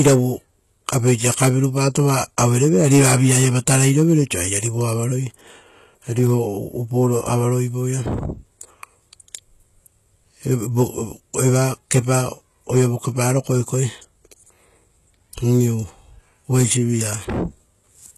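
From start to finish the speech carries a gritty, metallic edge on its s sounds, and the treble has a synthetic brightness that stops dead at about 12.3 kHz. The damage is plainly audible. The likely cause is HE-AAC compression at a rate that sounds close to 16 kbps: only the lower band is truly coded, and the top is rebuilt by copying lower bands upward, so the high harmonics fail to line up with the real ones.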